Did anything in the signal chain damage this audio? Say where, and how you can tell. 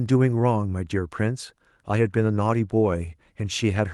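No, nothing in the signal chain damaged this audio.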